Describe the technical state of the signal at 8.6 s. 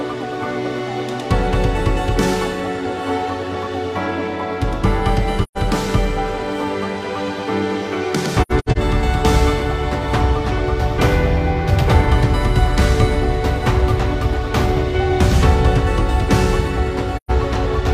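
At 8.6 s the signal sits inside a stretch of AAC frame loss with muting, running from 8.42 to 8.77 s. Coded frames in this window never reached the decoder, so it zeroed their spectral content. The overlapping transform windows turn each gap into a gradual fade out and back in. About 0.21 s of audio is missing in total, spread across the 0.34 s span, which fits several dropped frames. The longest continuous hole lasts roughly a tenth of a second.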